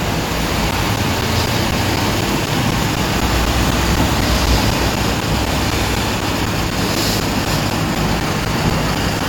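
From 0.71 s to 9.21 s the sound is punctured by a steady run of ticks, four every second, spaced 0.25 s apart and heard only where there is signal to interrupt. These are periodic USB or driver dropouts: something stalls the USB bus or audio driver on a fixed schedule, and each time a short piece of audio, around 10 ms, is lost and replaced with silence, roughly forty gaps in all.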